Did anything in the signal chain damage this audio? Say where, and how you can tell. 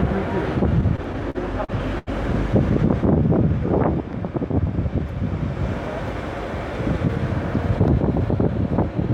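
Yes: repeated stalls (stutter) from the network jitter buffer, 0.69–2.09 s. Nine gaps, longest 84 ms, are filled by held or fading sound, showing as smeared, repeated spectrogram slices.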